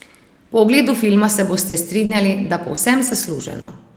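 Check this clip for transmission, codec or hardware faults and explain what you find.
From 1.57 to 3.69 s, just after "ogledu filma se", repeated packet loss (robotic sound): four gaps, longest 60 ms, patched by extending prior audio, leaving the speech choppy.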